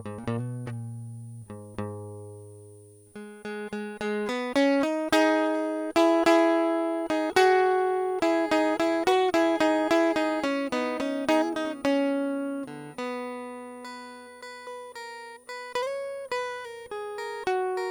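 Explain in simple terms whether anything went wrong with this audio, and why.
A switching power supply in the recording chain was running in an audible burst mode or beating with another supply, causing a switching supply whistle. Throughout the music, a faint high whistle sits near 9.4 to 9.6 kHz, drifting slightly in pitch, well below the music's level.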